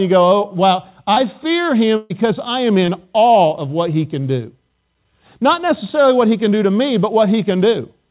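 Short concealed packet loss occurs in this speech clip at 1.14 s, just after "oh wow", and again at 2.86 s, between "I am" and "awe of what he". Each time about 20 ms of audio failed to arrive, and the receiver extended the preceding sound to cover the gap, leaving a brief smear or wobble. A burst of packet loss runs from 1.96 to 2.12 s, just before "I am". About 140 ms of audio is missing, and concealment stretched the last sound into a fading buzz or hiss with no silent stretch. Speech then resumes past the lost portion. Throughout, nothing is heard above 4 kHz, which fits a narrowband telephone codec such as G.711 on the call path.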